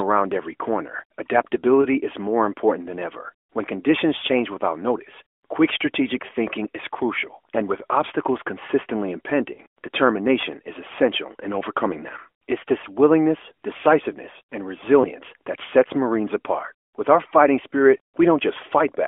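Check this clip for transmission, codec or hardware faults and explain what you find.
There are four short dropouts from lost AMR speech frames at 1.82–1.86 s, 4.18–4.24 s, 9.54–9.60 s and 15.02–15.09 s. These frames failed their error check, so the decoder repeated the previous pitch and vocal tract settings at lower gain. The result is a brief warbling dip, with smeared, flattened harmonics on a spectrogram and a sagging envelope in the waveform. The dips fit one lost 20 ms frame at 1.82 s and 15.02 s, and about two at 4.18 s and 9.54 s. The narrowband path itself stays within the 300–3400 Hz telephone band.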